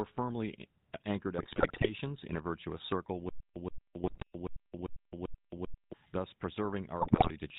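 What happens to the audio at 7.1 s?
At 7.1 s the speech falls into GSM bit errors, lasting from 7.00 to 7.31 s. Corrupted bits in the received stream reach the decoder, so for a run of consecutive frames it rebuilds the sound from wrong filter, pitch and gain values. The result is squawking, popping and gargled distortion with sudden level jumps. Packet loss would instead leave gaps or smeared repeats. Here the sound keeps going but turns garbled, which points to corrupted data rather than missing data.

Underneath the whole clip, and so at 7.1 s as well, is the GSM full-rate codec. Its fixed rate fits 13 kbps. The codec models the vocal tract and drives that model with a sparse, regularly spaced pulse train, and nothing above 4 kHz survives. The damage is plainly audible as a buzzy, gravelly roughness. A simple low-pass filter would only dull the speech, so it is this grainy texture that marks the codec.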